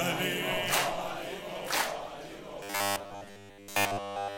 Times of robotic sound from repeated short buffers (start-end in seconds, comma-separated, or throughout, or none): 2.63-4.37